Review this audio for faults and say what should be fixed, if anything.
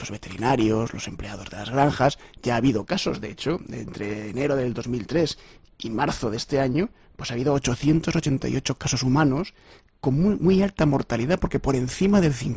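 Nothing stood out on listening, so there is nothing here that needs fixing.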